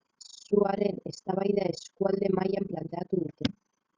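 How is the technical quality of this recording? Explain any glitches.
The speech is marred throughout by overlap-add ripple: a fast, rough flutter, like a robotic tremolo, pulsing around 30 times a second. The level swings by about 60 dB within each cycle. The audio was split into windowed frames and rejoined with an overlap that doesn't sum to constant gain, so loudness dips once per frame.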